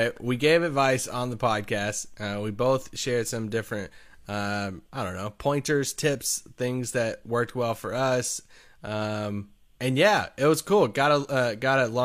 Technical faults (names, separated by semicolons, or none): none